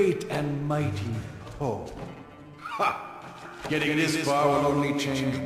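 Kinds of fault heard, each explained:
Doubled audio track: from about 3.4 s to the end, a second full-band copy of the sound trails the original by roughly 150 ms, about 5 dB quieter, dry with no room tail, and it cuts in abruptly. Likely a second, slower capture path mixed in.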